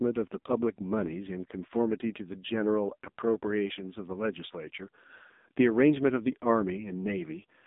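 From start to finish the speech passes through the AMR narrowband mobile codec at 5.9 kbps. Nothing survives above 3.8 kHz, and the line band runs from about 200 Hz to 3.7 kHz, which gives the thin phone-call sound. The codec rebuilds the voice from a vocal-tract model excited by a few pulses per subframe. At this low bitrate that leaves a heavy buzzy, synthetic texture, which separates it from simple telephone band-limiting.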